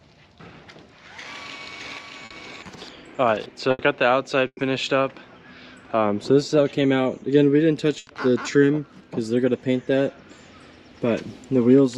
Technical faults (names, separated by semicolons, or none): doubled audio track; burst of packet loss